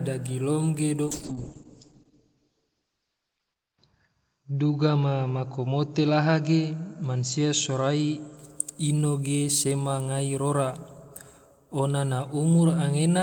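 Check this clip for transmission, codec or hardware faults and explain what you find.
One transmission fault is present: a call bitrate drop from 1.06 to 8.43 s, starting just after "dagilom ge". The encoder's rate falls from 32 to 8 kbps, bottoming out for about 2.5 s, and audio bandwidth narrows from 20 kHz to 8 kHz. The speech turns muffled and coarsely watery, then clears as the rate recovers. Unlike a simple low-pass filter, it adds grainy coding roughness, not just dullness.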